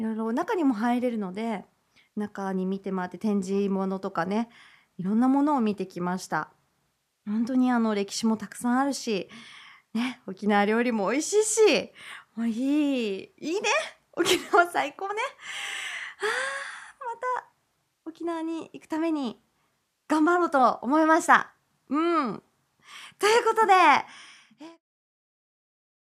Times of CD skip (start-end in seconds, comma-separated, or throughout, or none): none